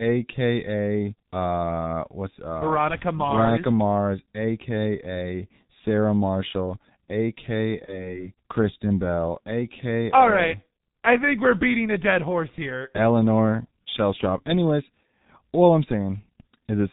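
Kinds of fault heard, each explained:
G.723.1 codec: An early internet-telephony speech coder, and its signature runs through the whole clip. Nothing survives above 4 kHz, so the speech sounds muffled, and the coarse vocal-tract model updated only every 30 ms leaves the voice hoarse and smears consonant onsets together. The damage is heavy, which fits a low-rate mode of about 6.3 kbit/s.
VoIP packet loss concealed by the speech codec: A packet never arrived, so the decoder filled the gap by extending its last pitch and spectral shape at falling gain. From 7.85 s to 8.18 s the speech turns into a stretched, buzzy tone or coloured noise that fades. The gap points to one lost 30 ms frame. Because each decoded frame depends on the previous one, the voice stays weak or distorted for tens of milliseconds or more after audio resumes.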